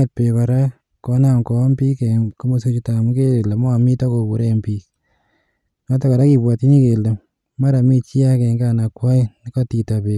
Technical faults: none

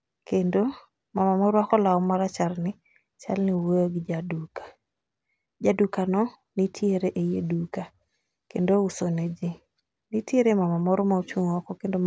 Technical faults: none

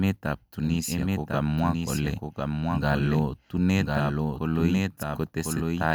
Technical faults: doubled audio track

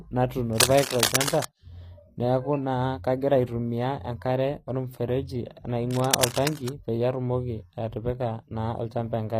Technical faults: HE-AAC compression; cable scratch noise

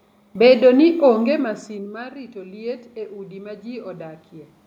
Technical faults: automatic gain rising

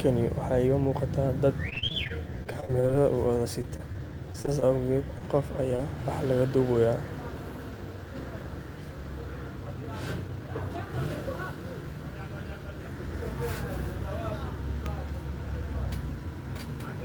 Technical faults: repeated packet loss (robotic sound); jitter buffer slow-down; scattered short gaps; jitter buffer speed-up

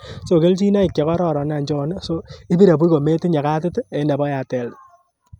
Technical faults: none

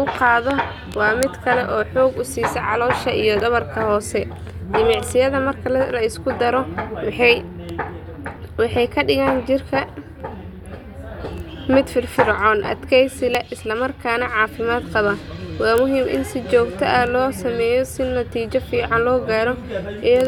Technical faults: audio missing between chunks

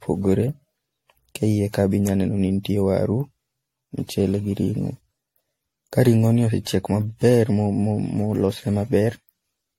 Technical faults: generation loss

